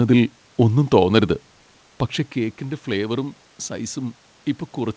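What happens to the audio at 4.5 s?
Nothing goes wrong at 4.5 s; the speech carries on intact through that moment, with the room noise and the call codec's limited bandwidth, nothing above 8 kHz, sounding just as they do throughout.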